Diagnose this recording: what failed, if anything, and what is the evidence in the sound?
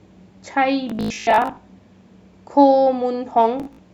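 The failure is Bluetooth stutter on the wireless link. From 0.90 to 1.57 s the speech breaks into a machine-gun buzz. About 0.41 s of sound is missing, scattered across that span, with the longest gap near 93 ms. The pattern points to roughly twenty-two dropped packets. A shorter burst follows at 3.60 to 3.79 s, losing about 0.11 s. Packets arrived late or not at all. The receiver replayed its last short slice until data returned. Speech then resumed further along.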